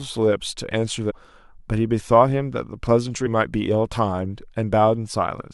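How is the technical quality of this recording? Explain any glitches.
Two short glitches break into the speech, both from damaged data in a compressed stream. From 1.09 to 1.12 s and again from 3.25 to 3.27 s there is a brief blip, each lasting about 20 ms. Corrupted bytes in those frames leave the decoder unable to read them properly. It loses sync and decodes garbage or skips ahead until it finds the next valid frame header, which briefly breaks up the audio.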